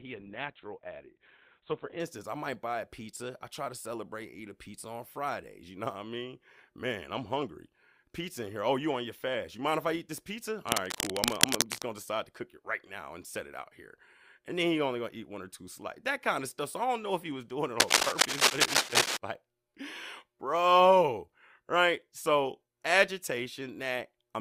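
A speech recording with two technical faults. It opens with an adaptive stream starting at a low bitrate. From 0.0 to 2.0 s the sound is dull and smeared. Nothing is present above 4.2 kHz, and codec artefacts are strong. The sound fits a very low-rate Opus stream near 12 kbit/s. The player is starting cheaply while it measures the connection. At 2.0 s the quality jumps with no gap. It settles at what sounds like a much better stream, around 64 kbit/s. Later, cable scratch noise appears twice, from 10.69 to 11.87 s and from 17.78 to 19.17 s. Each time, dense, uneven rustling bursts sit over the speech. The first is about as loud as the speech. The second is about 5 dB louder than the speech. The likely cause is a worn cable, connector or control being moved. Its contact resistance changes rapidly as it moves.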